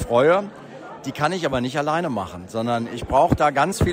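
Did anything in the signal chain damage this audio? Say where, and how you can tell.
No, nothing in the chain damaged this audio.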